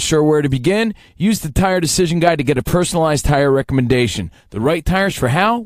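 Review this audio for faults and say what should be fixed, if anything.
Nothing to fix: no faults found anywhere in the speech recording.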